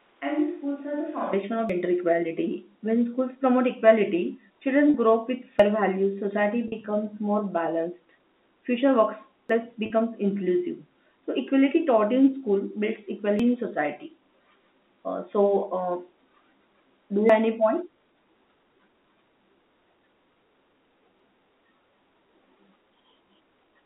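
Speech that starts on a distant microphone: for the first 1.33 s it sounds roomy and hollow, thin in the bass, about 5 dB quieter, with room noise only some 35 dB under the speech, and then it snaps to the close sound, likely because the close mic's feed was missing at first. Audio missing between chunks shows up as tiny skips at 1.69, 5.59 (between "grow up with" and "values society"), 9.49 (right after "more balanced future"), 13.39, 17.29 and 21.19 s. That's every 4 s, and each time roughly a tenth of a second is gone with the two sides butted straight together, which points to a recorder dropping a piece at each chunk boundary. Packet loss with pitch repetition gives brief held, buzzy moments at 4.90 s (just before "grow up with"), 6.68 s and 9.86 s, each 40 ms, and at 20.34 s for 20 ms. Those fit two lost 20 ms packets in the first three spots and one in the last, with the receiver looping the last pitch cycle to cover each gap. 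The telephone-band G.711 coding underneath is working as it should.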